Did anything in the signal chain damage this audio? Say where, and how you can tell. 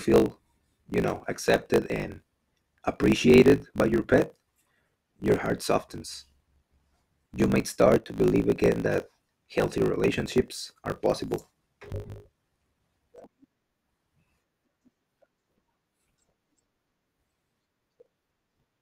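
Yes. Between the driver and buffer stages, one stage writes blocks longer than the next stage reads, and the tail of every block is discarded. Throughout the clip this is a block size mismatch (truncated): a steady buzz at 50 Hz marks each cut, and the speech runs about 1.16 times faster than normal while staying near its normal pitch. The size of the discarded portion fits a writer using a 1024-sample block.

One channel drops out twice, likely from an intermittent connection in the analogue wiring carrying that side of the stereo pair. From 7.97 s to 8.17 s, between "you might" and "again that healthy relationships", the level steps down by about 6 dB and recovers abruptly. A second, shorter drop of about 6 dB follows from 13.24 s to 13.29 s. That step is what material shared by both channels loses in the mono sum when one side vanishes.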